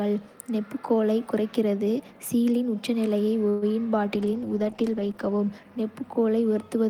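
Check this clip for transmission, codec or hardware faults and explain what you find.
Two faults are present: a call audio freeze and a call bitrate drop.

From 3.49 to 3.73 s, right after "நெம்புகோலைக் குறைத்து கீலின் உச்சநிலையை", there is a call audio freeze. Packets were likely held up in transit, so the jitter buffer ran dry and the receiver stretched the last sound to fill about 126 ms, with no true silence. When the packets arrived, playback resumed where it had stopped. Nothing is lost, but a brief fading buzz or hiss is inserted and everything after it lands 126 ms later.

From 4.14 to 6.21 s there is a call bitrate drop. The call's bandwidth estimate fell, and the encoder was cut from 32 kbps to 13 kbps, staying at the lowest rate for about 1 s. At that rate Opus codes the signal far more coarsely and trims the upper frequencies, so the speech turns rough, watery or muffled until the bitrate climbs back.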